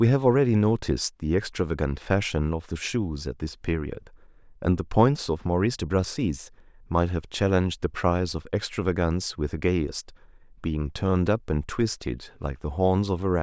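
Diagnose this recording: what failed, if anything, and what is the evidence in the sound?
Nothing in the recording points to a failure at any stage of the chain: the speech signal holds together as one continuous, steady capture with nothing in it that departs from ordinary recorded sound.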